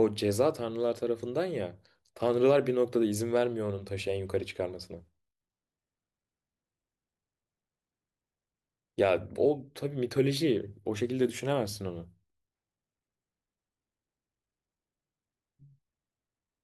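A careful listen to this speech recording turns up nothing that stands out.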